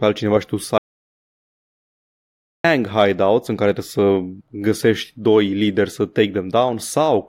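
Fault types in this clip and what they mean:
Audio dropout to silence: the speech cuts out at 0.78 s and returns at 2.64 s, about 1.86 s of flat silent waveform and blank spectrogram, likely from lost input.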